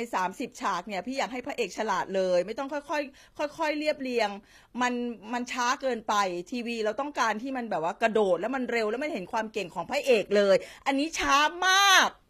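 From start to end, the speech likely carries HE-AAC compression: treble is rebuilt by band replication, leaving gritty, lispy sibilants, mismatched harmonics, and a spectrogram that goes empty above 14.9 kHz.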